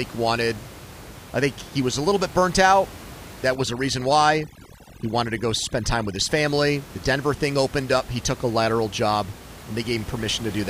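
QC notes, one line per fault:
3.55 to 6.29 s, overdone noise removal: for this stretch the background drops and breaks up into twinkling specks. A noise reduction stage set far too hard is zeroing individual frequency bands whenever they sit close to its noise estimate, taking the quieter parts of the speech along with the background noise. On a spectrogram the floor goes dark and patchy with isolated bright flecks, and the speech harmonics look ragged and gapped; the room noise, about 18 dB under the speech elsewhere, is broken up here.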